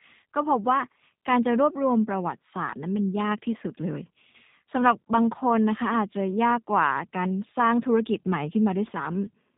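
Throughout, G.729 codec damage is plainly audible: speech stops dead near 4 kHz and sounds rough and synthetic, unlike simple band-limiting, which fits an 8 kbit/s G.729A stream.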